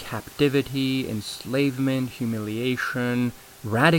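No technical faults in this speech; the only thing under it is the room's own background noise, sitting about 22 dB below the talker, which belongs to the recording space and not to the signal chain.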